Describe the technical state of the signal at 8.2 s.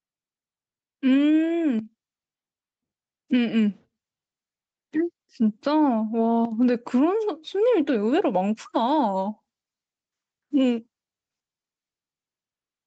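At 8.2 s the clip shows gain pumping, present throughout: the gain swings by around 5 dB, likely from excessive input gain driving a fast limiter.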